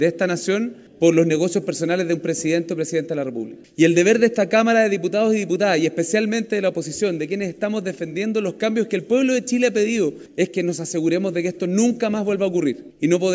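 Nothing in this recording trips the ear at any point; there's no dropout, glitch or distortion to point to anywhere along the way.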